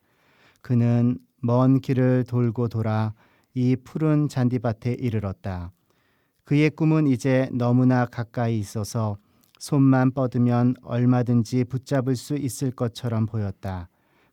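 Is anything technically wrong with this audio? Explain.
No, nothing is technically wrong.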